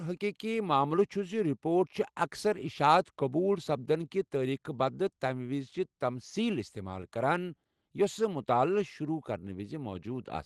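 No faults detected; the speech carries the ordinary coding texture of a call path, with the top end stopping near 12 kHz as expected for a super-wideband Opus setting.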